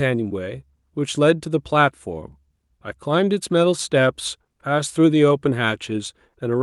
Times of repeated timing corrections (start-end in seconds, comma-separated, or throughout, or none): 0.29-6.51